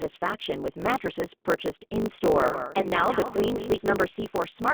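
The whole clip has a narrow, slightly rough and synthetic quality, with a band running from about 200 Hz to 3.6 kHz and nothing above it. That is the G.729 codec, here the G.729A variant at 8 kbit/s. It rebuilds speech from a vocal tract filter, a pitch predictor and a sparse pulse pattern rather than coding the waveform itself, and at this rate the damage is plainly audible.

Also present from start to finish is a steady 50 Hz buzz, and the speech runs about 1.07 times faster than natural while keeping roughly its normal pitch. This is a block size mismatch (truncated). An upstream stage writes blocks of around 1024 samples, and the next stage reads shorter ones, so the tail of every block is discarded. Each cut makes a small discontinuity, and those cuts, repeated 50 times a second, form the buzz. Throwing away material compresses time without shifting pitch.

From 2.26 s to 3.95 s a second, fainter copy of the sound trails the original by roughly a fifth of a second, sitting about 10 dB down. 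It begins and ends abruptly and has no decay or room colour, so it reads as a doubled audio track rather than an echo. The likely cause is the signal being picked up a second time through a slower path and mixed back in.

Inside that stretch, at 2.81 to 2.87 s, the sound briefly smears and fades. This is VoIP packet loss concealed by the speech codec: about 20 ms of data went missing, consistent with a single lost packet. The decoder filled the gap by extending its last pitch and filter settings at decreasing gain. Because each frame depends on the previous one, the speech stays weak or distorted for tens of milliseconds or more after the data resumes.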